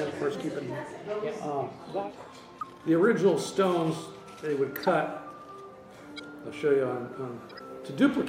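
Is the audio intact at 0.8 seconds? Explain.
Yes, the audio is intact at 0.8 seconds, with no fault at that moment.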